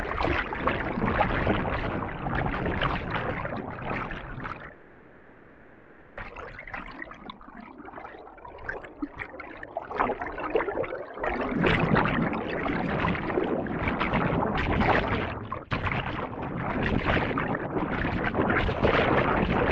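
From 4.73 to 6.19 s the sound gives way to a synthetic buzzy continuation that fades into low steady noise, never true silence, and resumes with about 1.44 s missing. This is likely a long network dropout, not a brief packet loss, given its length. Across the clip the top end stops near 8 kHz, as expected from the call codec.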